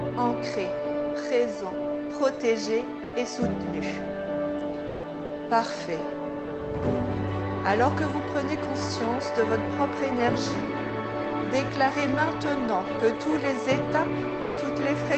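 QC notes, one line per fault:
3.03–3.13 s, 4.87–5.03 s, 5.25–5.29 s, 14.41–14.57 s: sound dropped by the voice detector. The sound drops out for 100, 160, 40 and 160 ms and is replaced by steady noise or near silence, likely because Opus DTX judged it background, sent nothing, and the receiver substituted comfort noise until detection resumed. The sound around these gaps stops at about 8 kHz.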